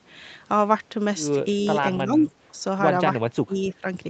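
The speech dips at 2.04–2.28 s, 2.52–2.57 s, 3.31–3.55 s and 3.71–3.84 s, down by roughly 10, 5, 20 and 10 dB. That's likely speech suppressed in double talk: the echo canceller, hearing the far end at once, turned this talker down too.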